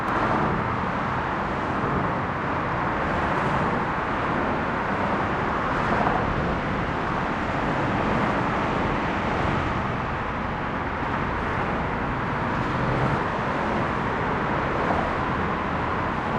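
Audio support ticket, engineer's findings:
Channel delay (doubling), throughout: every event repeats about 85.3 ms later at equal level. One channel is late, likely by a 4096-sample buffer, before the mono sum.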